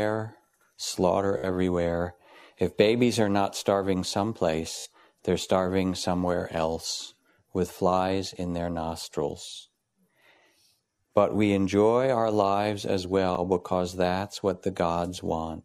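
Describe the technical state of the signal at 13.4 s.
At 13.4 s the speech hits a Bluetooth stutter running from 13.35 to 13.40 s. Data arrived late or not at all, so the receiver replayed its last buffer to cover the gap, consistent with a single lost frame of about 15 ms (15.2 ms of audio). It is a brief stuttering catch in the voice. On a waveform, a short slice repeats identically; a spectrogram shows a smeared, vertically striped block before the speech resumes slightly ahead.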